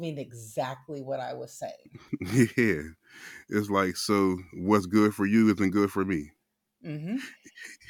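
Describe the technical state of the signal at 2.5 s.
At 2.5 s the speech signal is intact, with no audible dropout, distortion, or other technical fault.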